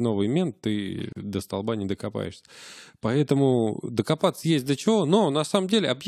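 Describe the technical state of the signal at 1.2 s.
Right around that point the speech drops out for about 38 ms, from 1.13 s to 1.16 s, with edges smeared by the codec, and then resumes exactly where it stopped. This is a gap at a join of encoded pieces. The audio was encoded in separate sections and joined without trimming, so the encoder's leading delay and the padding of the previous section's final frame remained as a short stretch of inserted silence.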